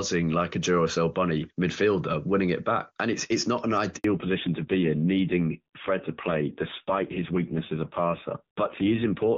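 A handover gap opens in this speech recording at 3.96 s, just after "it's it's not an": no frames arrive for 80 ms while the call switches networks, so the sound simply drops out until 4.04 s. From 4.04 s to the end there is a fallback to narrowband, with nothing above 4 kHz. The clear wideband HD Voice sound of the opening gives way to a duller, rougher band-limited tone, which fits a low-rate AMR narrowband mode of around 5.9 kbit/s.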